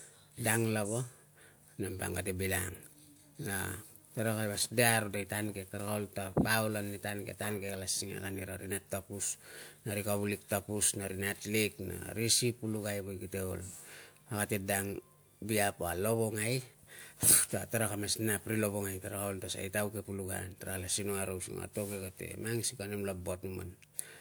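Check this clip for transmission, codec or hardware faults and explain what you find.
Nothing turns up here; the speech comes across without any transmission, codec or hardware trouble worth pointing out.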